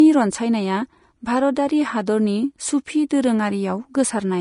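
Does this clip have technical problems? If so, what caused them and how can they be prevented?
Yes. Throughout the speech the treble sounds hissy and grainy, with roughened tones and blurred attacks. This is likely Vorbis compression at about 33 kbps, where upper frequencies are quantised so coarsely that detail becomes noise. Encoding at a higher bitrate or quality setting prevents it.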